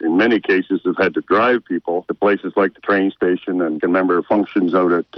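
A Bluetooth SBC bit pool drop runs from 4.31 s to 5.17 s. The link squeezed the encoder's bit budget, consistent with a fall from bit pool 31 to 10, near 77 kbps. Upper sub-bands lose their bits, so the treble dulls and gritty quantisation noise rises through the end.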